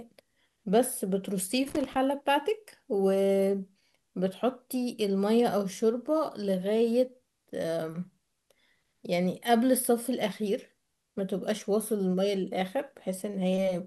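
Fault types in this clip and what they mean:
Loose connector crackle: a worn or dirty contact somewhere in the cable path keeps making and breaking as it shifts, so the speech is chopped on and off and small DC jumps turn into pops. Here it comes as one short, irregular burst of scratchy crackle from about 1.68 s to 1.96 s. Its uneven, gritty texture sets it apart from digital dropouts, which leave clean gaps or evenly spaced clicks.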